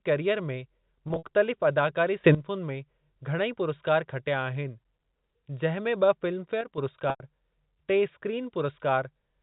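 Telephone speech carried over G.711 mu-law, so nothing above 4 kHz appears. Packet loss with pitch repetition occurs at 1.08 to 1.24 s, where 100 ms of audio is missing in gaps scattered over 160 ms with the longest run 60 ms, and again at 7.10 to 7.20 s, with 100 ms missing. This fits five lost 20 ms packets in each case. The receiver repeats the last pitch period, fading it out over about 50 ms. On a spectrogram these gaps show frozen, evenly spaced harmonic stripes that fade, and on the waveform they show identical repeating cycles. A sudden gain jump at 2.24 s raises the level by about 14 dB, and another at 6.61 s drops it by about 6 dB. Speech and background noise step together, likely from a gain setting applied without a ramp. Each jump appears as an abrupt step in the waveform envelope and a vertical brightness change across the whole spectrogram.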